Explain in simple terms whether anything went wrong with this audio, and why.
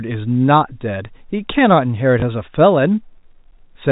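At 2.2 s there is a tiny blip. This is packet loss with last packet repeated: one 20 ms chunk went missing, and the previous chunk was replayed in its place.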